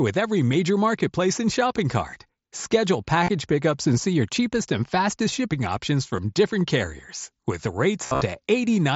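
Concealed Bluetooth headset packet loss shows up at 0.52 s, at 2.11 s after "marketplace and shopping", at 3.24 to 3.30 s, at 6.17 s, and at 8.06 to 8.21 s. The receiver patches each dropped packet by repeating recent waveform. The single one at 0.52 s barely registers, but the ones at 3.24 s and 8.06 s go briefly buzzy and warble as real audio returns.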